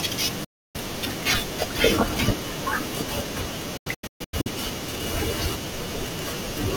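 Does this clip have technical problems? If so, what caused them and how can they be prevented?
Yes. Digital broadcast dropout mutes the speech from 0.44 to 0.78 s and in several short holes between 3.77 and 4.50 s, each with a quick fade of about 8 ms, fitting a receiver silencing corrupted frames. Stronger reception or more robust error protection prevents it.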